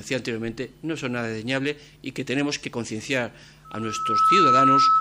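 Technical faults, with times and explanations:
3.64 to 5.00 s, loudspeaker feedback squeal: the microphone picks up the loudspeaker it drives, and at 1.3 kHz the loop gain exceeds one. That tone reinforces itself, swelling over roughly 0.7 s into a piercing squeal about 10 dB above the sound.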